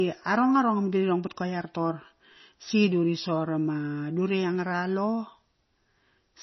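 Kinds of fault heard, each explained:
MP3 compression: watery, swirly speech, likely from low-bitrate encoding near 24 kbps; the spectrogram shows a hard ceiling at 5.9 kHz and flickering gaps.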